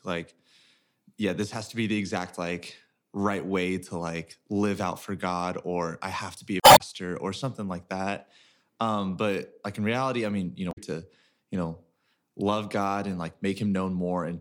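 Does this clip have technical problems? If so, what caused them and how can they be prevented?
Yes. The speech has two short bursts of damaged data in a compressed stream. The first runs from 6.60 to 6.81 s, after "have to be a" and before "or something like that". The second runs from 10.69 to 10.78 s, after "reality I mean you" and before "to you know love". Each is a brief disruption in the speech. Corrupted bytes made the decoder misread frames, lose sync and hunt for the next valid header. Checksummed, error-protected transfer and storage would prevent it.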